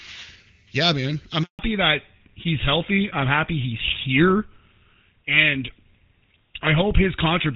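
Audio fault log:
1.43–1.59 s, handover gap: the call hops networks here and nothing arrives for 160 ms, so the sound fades out within a few tens of milliseconds and sits silent until the new link picks up. Whatever was said in that window is gone.
1.59–7.56 s, fallback to narrowband: right after the switch, everything above 4 kHz disappears. The crisp HD Voice band before it, which sounds like a high-rate AMR-WB link, gives way to a duller, rougher sound that fits an older codec such as GSM full rate.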